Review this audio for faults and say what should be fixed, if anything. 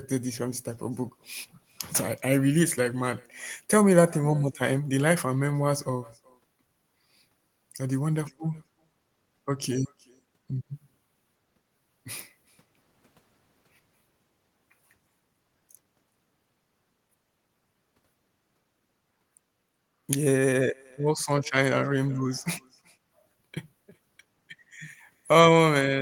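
Echo with no canceller runs throughout: the far end's loudspeaker feeds its microphone, so each phrase returns around 0.4 s later, thin, about 28 dB down. A spectrogram shows every syllable trailed by a faint, shifted copy. Acoustic echo cancellation or a headset at the far end would prevent it.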